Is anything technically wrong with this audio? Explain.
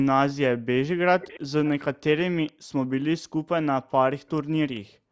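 Yes, two faults appear: an echo leak and background gated by the echo canceller.

The echo leak comes at 1.2 to 1.4 s, 1.65 to 1.69 s, 2.47 to 2.52 s and 4.75 to 4.79 s. A faint copy of earlier speech returns about 460 ms late, first about 20 dB under the voice, then about 25 dB, and by the last two scraps about 35 dB down. The likely cause is a far-end loudspeaker whose canceller let part of the playback through its microphone. On a spectrogram these show as weak, smeared repeats of earlier harmonic patterns.

The background is gated by the echo canceller at 2.52 to 2.72 s, 3.21 to 3.32 s, and from 4.89 s to the end. Each time the canceller sensed loudspeaker activity, it pulled the microphone down by up to about 40 dB, so the room tone collapses for a fifth or a tenth of a second and, except in the last dip, which lasts to the end, then returns. A waveform shows the noise floor abruptly thinning to near silence. 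A spectrogram shows vertical bands of missing texture below the 8 kHz ceiling of the call's band.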